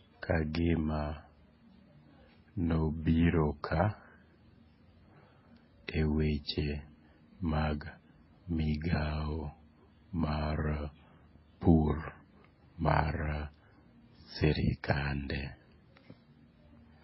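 Throughout, the speech has nothing above 5.6 kHz and two kinds of smeared, swirly coding artefacts; transcoding between lossy codecs, likely low-bitrate MP3 followed by AAC, explains it.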